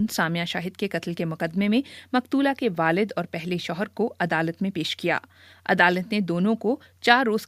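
Nothing goes wrong anywhere in this one; there are no technical faults to point out at any moment.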